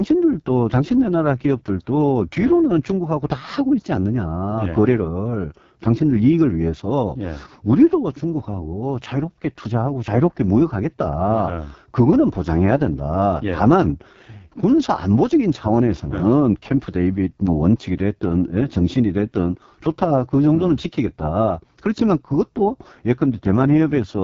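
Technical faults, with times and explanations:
Throughout: AMR wideband (HD Voice) codec. The speech has a rough, raspy, buzzy texture, and the damage is heavy. That points to AMR-WB at its lowest mode, fitting roughly 6.6 kbit/s. Too few bits go to the pulse excitation driving the vocal tract model, so the voicing turns coarse. The band above 6.4 kHz is synthetic shaped noise, giving a hissy top, and nothing is present above 7.5 kHz.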